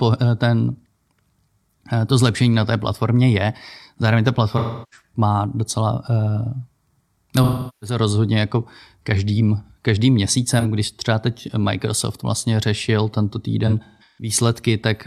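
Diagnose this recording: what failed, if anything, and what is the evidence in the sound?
The codec stage failed, with AAC frame loss with concealment. Smeared, phasey patches occur at 4.57–5.03 s, at 7.43–7.97 s before "rozhodně jako každým každým", at 10.59–10.66 s, and scattered across 13.66–14.33 s after "vlastně řešil tento". The decoder resynthesised missing frames from the last good spectrum, in steps that fit 43 ms frames.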